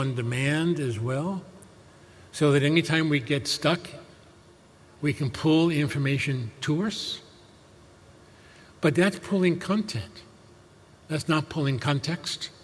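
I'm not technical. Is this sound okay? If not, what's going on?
Yes, nothing wrong can be heard anywhere in this recording.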